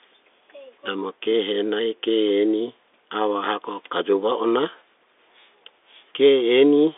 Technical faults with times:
none

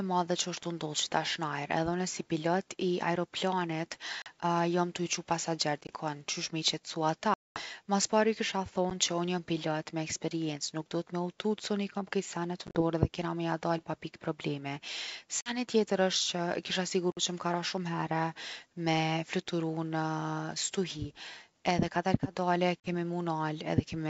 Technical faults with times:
4.22-4.28 packet loss on an ADPCM call
5.81-5.91 packet loss on an ADPCM call
7.34-7.62 packet loss on an ADPCM call
8.90-8.92 packet loss on an ADPCM call
12.67-12.82 packet loss on an ADPCM call
15.41-15.58 packet loss on an ADPCM call
17.12-17.19 packet loss on an ADPCM call
22.80-22.88 packet loss on an ADPCM call

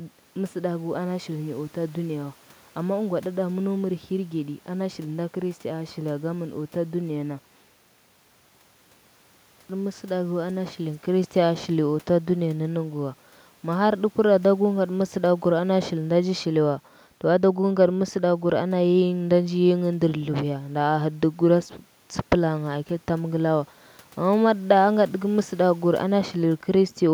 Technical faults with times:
none

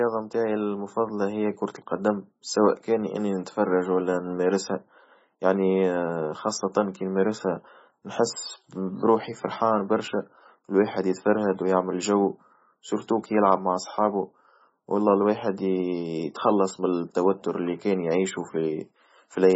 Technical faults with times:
0.00-19.56 MP3 compression

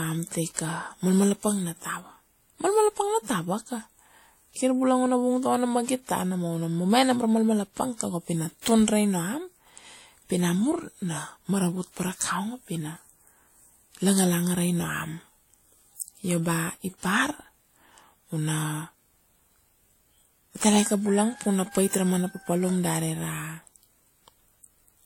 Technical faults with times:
0.00-25.06 transcoding between lossy codecs

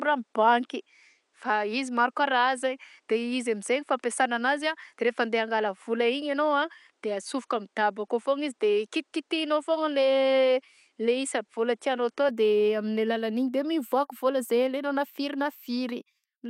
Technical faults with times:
0.00-12.29 input switched to a poorer device

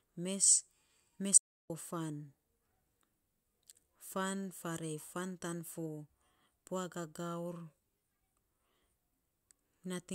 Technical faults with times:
1.38-1.70 audio dropout to silence

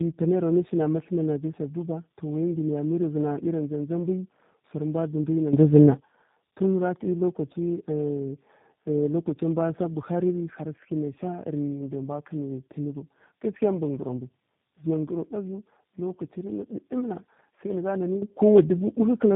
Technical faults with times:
0.00-19.35 tandem speech coding
18.22-19.35 sudden gain jump

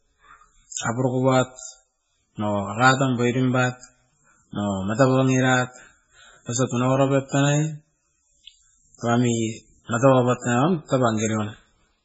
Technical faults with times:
0.00-12.05 MP3 compression

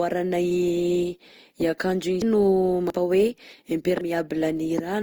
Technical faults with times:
0.00-5.03 generation loss
0.51 dropped buffer (overrun)
2.22 dropped buffer (overrun)
2.90 dropped buffer (overrun)
4.01 dropped buffer (overrun)

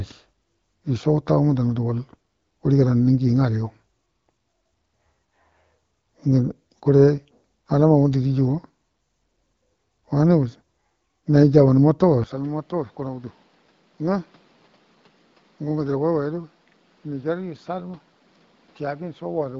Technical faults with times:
12.24-19.59 input switched to a poorer device

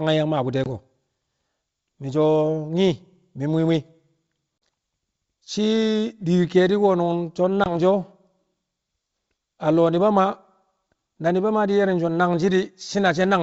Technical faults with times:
0.64-0.68 packet loss on an ADPCM call
4.60 packet loss on an ADPCM call
7.64-7.75 packet loss on an ADPCM call

